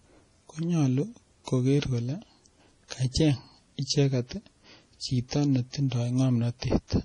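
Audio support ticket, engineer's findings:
Watery, swirly speech throughout, metallic chirp on s sounds; spectrogram shows hard ceiling at 10.4 kHz and flickering holes. Likely MP3 compression, heavy, fits a bitrate near 32 kbps.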